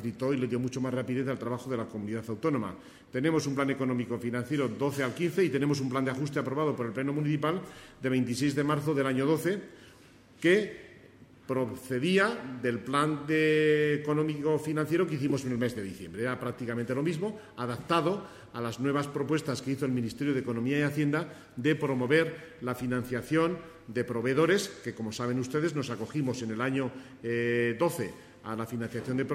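No audible technical faults detected.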